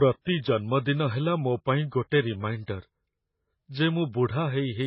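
It's a short speech recording that has transcoding between lossy codecs all the way through. Nothing comes through above about 7.9 kHz, and the smeared, swirly low-bitrate artefacts sound layered, most likely a very low-rate MP3 pass later re-encoded to AAC-LC.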